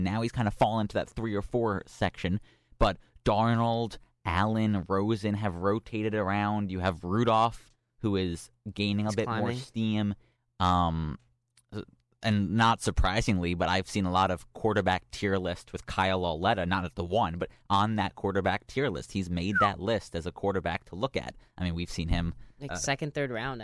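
No technical faults are audible anywhere in the recording.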